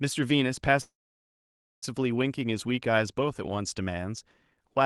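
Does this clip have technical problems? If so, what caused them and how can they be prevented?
Yes. A call audio freeze runs from 0.81 to 1.84 s. The sound fades, then stays silent about 0.9 s. It resumes where it stopped, likely after delayed packets drained the jitter buffer. A larger adaptive jitter buffer and a steadier network route would prevent it.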